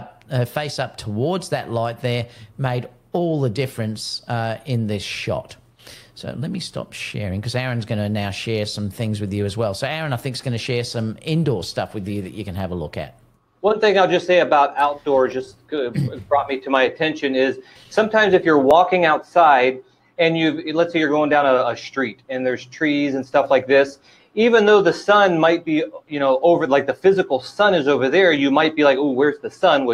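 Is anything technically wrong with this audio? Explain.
No, nothing technically wrong can be heard in this audio. Listening closely from beginning to end turns up no fault worth reporting.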